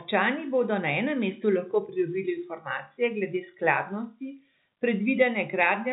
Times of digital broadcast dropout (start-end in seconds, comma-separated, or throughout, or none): none